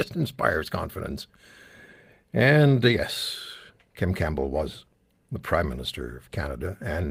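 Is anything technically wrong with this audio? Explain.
No, no technical faults.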